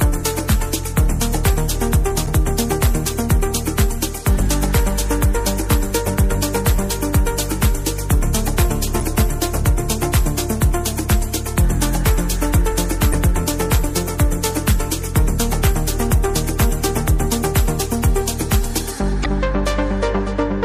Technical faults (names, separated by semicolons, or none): MP3 compression; damaged data in a compressed stream